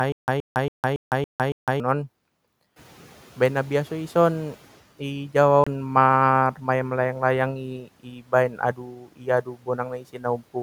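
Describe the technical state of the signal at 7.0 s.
At 7.0 s the signal is intact, with only the room's own background noise sitting about 29 dB below the speech.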